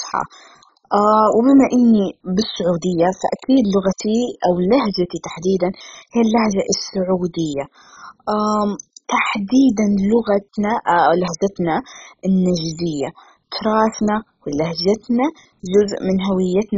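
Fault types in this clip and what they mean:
MP2 compression: The speech is dull and gurgling throughout, with a granular, rough texture and nothing above about 7.5 kHz. This is likely heavy MPEG Layer II coding at a very starved rate, consistent with roughly 16 kbps. With so few bits, upper sub-bands drop out entirely and the surviving bands are coarsely quantised. The grainy, bubbling distortion rides on the remaining sound, which sets it apart from a clean low-pass filter, whose top is merely smooth and muffled.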